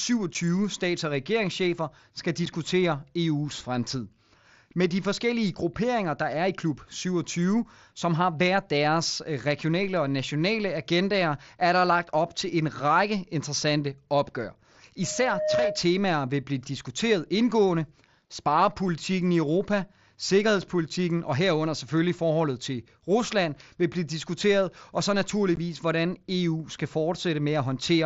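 Speech heard through a Bluetooth mSBC headset link, wideband to 8 kHz with light graininess, has two faults. Unconcealed Bluetooth headset packet loss cuts abrupt holes at 0.34 s, 2.46 s and 25.56 s. Each lasts exactly one packet length, 7.5 ms, except the last at 15 ms, which fits two lost frames. That fixed length separates them from random dropouts. From 15.03 to 15.91 s a loudspeaker feedback squeal appears: a single 616 Hz tone that grows by itself over about half a second to roughly 5 dB above the speech. Unlike a steady hum, it swells.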